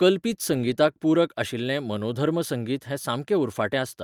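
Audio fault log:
No faults are heard in this speech recording. Nothing in it needs an entry in the log.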